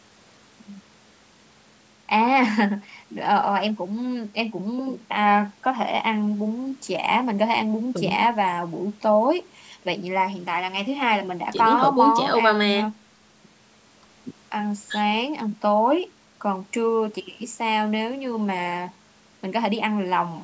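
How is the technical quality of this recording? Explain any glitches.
No glitches or faults heard.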